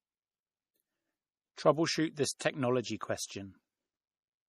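Right from the start the whole recording sounds watery and swirly, with nothing above 14.8 kHz. That's likely MP3 compression at a low bitrate, something like 40 kbps, where the encoder cuts the treble and lets faint detail flicker in and out between frames.

At 1.55 s, and again from 2.38 to 2.41 s, there's pre-echo: a brief hiss creeps in ahead of a sharp onset, about 15 ms the first time and 30 ms the second. The codec smears the attack's noise backwards across its block, so the attack itself sounds softened.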